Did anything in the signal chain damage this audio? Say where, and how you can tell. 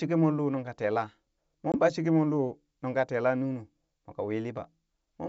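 Yes: packet loss on an ADPCM call, at the network stage, from 1.72 to 1.76 s. About 20 ms, roughly one packet, becomes a hard-edged silent gap, a flat line in the waveform and a blank stripe on the spectrogram. The decoder's predictor then briefly mismatches the sender's.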